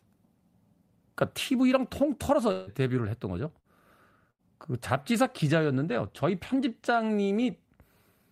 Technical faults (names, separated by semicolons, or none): long network dropout; burst of packet loss